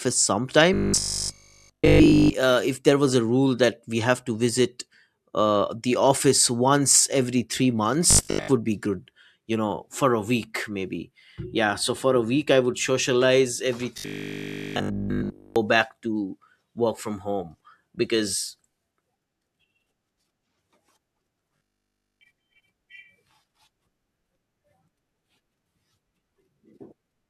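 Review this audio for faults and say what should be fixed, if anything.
Robotic sound from repeated short buffers shows up four times: 0.74–2.34 s (just before "uh if there was"), 8.11–8.49 s (after "office once every three"), 13.98–15.56 s (after "I would socialize every"), and 21.57–22.21 s. The speech turns into a stiff, metallic 50 Hz buzz, which fits a chunk of about 20 ms being replayed over almost the whole stretch, and most of it in the second spot, while fresh audio is dropped, likely from audio arriving too slowly for playback. Give the capture and transport chain more buffer headroom so playback never has to loop old chunks.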